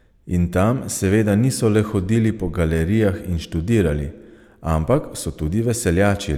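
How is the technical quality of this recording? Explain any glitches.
No technical glitches can be heard anywhere in the recording, and the signal stays continuous and stable throughout.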